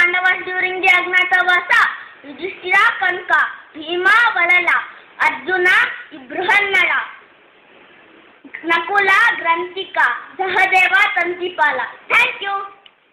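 Hard clipping runs through the whole clip: the signal is pushed about 1 dB past what the chain can pass, so the tallest peaks, roughly 0.7 percent of samples, are sliced flat. Those squared-off tops add high harmonics, heard as brief crackle on the loudest moments.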